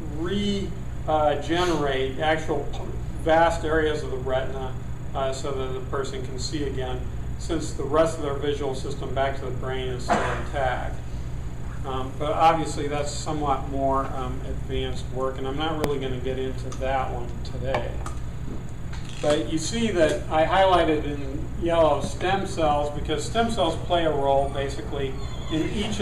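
At 15.84 s there is a single sharp bang. This is invalid numbers at full scale. A calculation produced infinite or invalid values, and the output was clamped to the largest possible sample value. The affected stretch lasts about 0.73 ms, which fits a block of 32 samples. The block is that short, so the loud edges at its start and end merge into one hard click. There is no audible silence between them.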